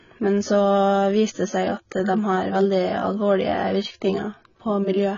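Throughout, the speech shows heavy AAC compression: content stops at 7 kHz and sibilants smear and warble, likely from AAC-LC quantising coarsely at a bitrate around 16 kbps.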